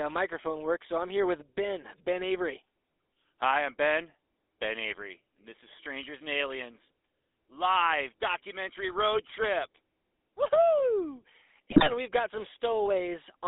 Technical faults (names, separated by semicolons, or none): GSM full-rate codec; GSM bit errors